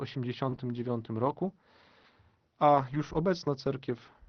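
At 0.49 to 0.55 s, a late packet left the jitter buffer empty, so a short stall from a late packet followed: the receiver stretched about 24 ms of the last speech sound, leaving it briefly held with a slight buzz or dip, and everything after runs 24 ms later. Packets were then lost at 0.52, 1.25, 2.03, 2.75 and 2.93 s, and each lost packet was rebuilt from error correction. The low-bitrate Opus copies carried in the following packets stood in for 60 ms each, so nothing drops out, but those stretches sound rougher and noisier than the surrounding 6 kHz-wide call audio.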